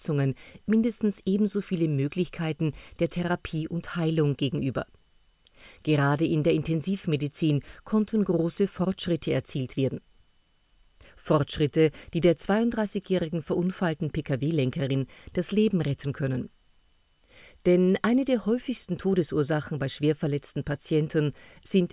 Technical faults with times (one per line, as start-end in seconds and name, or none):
none